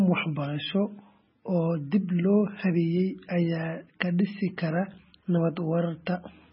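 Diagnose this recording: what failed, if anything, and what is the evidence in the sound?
MP3 compression throughout, at the codec stage: nothing above 5.5 kHz, with heavy watery swirling, which fits a starved encoder, likely around 16 kbps, zeroing weak frequency lines.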